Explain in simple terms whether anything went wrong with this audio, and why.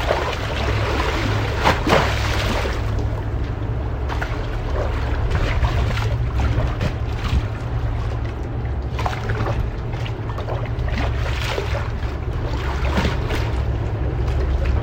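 Compressed frames were skipped three times, at 10.38 s, 12.33 s and 13.35 s. At each point the sound jumps forward, losing about a third of a second, then about 0.7 s, then about half a second. That suggests whole chunks of roughly 93 ms each were missing or rejected as damaged.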